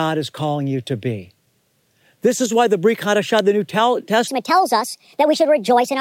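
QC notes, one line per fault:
3.39 s, electrical switching spike: a single sharp snap sits on top of the speech, abrupt and unrelated to the talker. This is likely a brief arc from a nearby switch, motor or static discharge coupling into the audio line for an instant.
4.28 to 6.00 s, section at the wrong speed: from here to the end the speech turns suddenly high and hurried, running 1.41 times too fast and raised by about seven semitones. This likely comes from this stretch being played against the wrong clock, shifting speed and pitch together.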